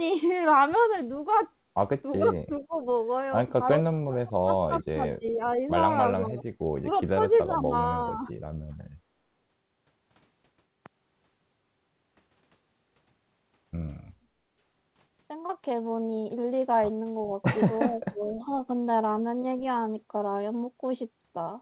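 Speech that repeatedly sinks in level or breaks into fragments, at 2.18–2.87 s, 3.8–5.62 s, 6.17–8.29 s and 17.9–18.51 s, with the deepest dips reaching roughly 15, 35, 10 and 30 dB. This is speech suppressed in double talk: with both ends talking at once, the echo canceller most likely could not tell this talker from the returning loudspeaker signal and turned everything down. Overlapping those same stretches a faint, delayed copy of the voice slips through, at 2.72–2.89 s, 4.82–5.32 s, 6.93–7.37 s and 18.26–18.31 s, trailing the original by 409 ms and sitting some 20 to 30 dB below the speech. This is an echo leak: the far side likely plays the call on a loudspeaker, its canceller left part of what its microphone captured, and that residue was sent back down the line. The narrowband sound, with nothing above 4 kHz, fits a G.711 call path at 64 kbps.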